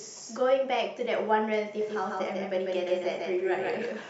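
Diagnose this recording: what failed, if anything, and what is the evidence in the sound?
From 1.81 s to the end, the speech is accompanied by a doubled audio track: a second full-band copy trailing about 150 ms behind and roughly 5 dB quieter, switching on abruptly at 1.81 s. The likely cause is a routing or capture stage where a slower second path, or a misaligned edit, sums the same signal back in. Unlike acoustic echo or reverb, there is exactly one copy, with no decay tail and no room colouration.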